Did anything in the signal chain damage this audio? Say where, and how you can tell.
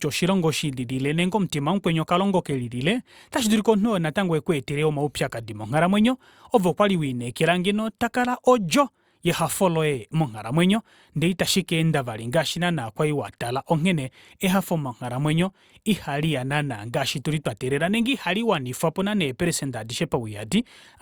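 No, no signal-chain damage heard.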